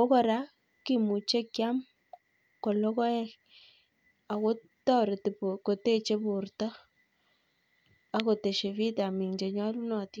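No dropouts, distortion or other technical faults can be heard anywhere in the recording.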